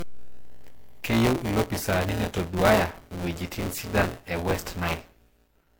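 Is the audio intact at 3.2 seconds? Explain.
No. At 3.2 seconds, as through the whole clip, a buffer tearing fault produces a steady robotic buzz at 172 Hz, which fits a 256-sample buffer. The writer and reader have slipped, so about a fifth of each period carries audio roughly 20 ms stale, with hard joins. Unlike a dropout, nothing goes silent, and the buzz follows the speech.

The speech also sounds swirly, smeared and hollow, with blurred attacks, beyond what 64 kbit/s MP3 alone would give. That is likely generation loss from several MP3 passes on shifting frame grids, which stack noise and spectral holes, unlike a single low-bitrate encode.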